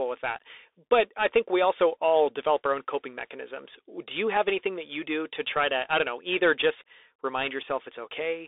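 Throughout, a Bluetooth CVSD headset codec's one-bit delta coding squeezes the speech into 300 Hz to 3.6 kHz, adding plainly audible granular hiss and scratchy sibilants.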